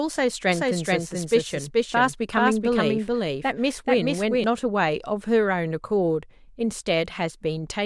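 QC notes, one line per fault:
0.52 to 4.44 s, doubled audio track: A second, full-band copy of the speech runs about 0.4 s behind the first and at roughly the same loudness. Every syllable is heard twice, so the speech smears into a stuttering overlap. The copy is dry, with no decay or room colour, which marks it as a duplicate and not an echo. It cuts in and out abruptly at both ends. The likely cause is a second, slower capture path mixed in alongside the main one.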